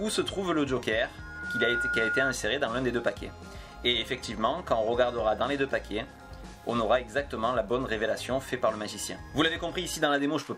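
Loudspeaker feedback squeal, 1.18 to 2.36 s: the microphone keeps re-amplifying its own loudspeaker, so a 1.4 kHz tone swells within half a second, rising above the sound.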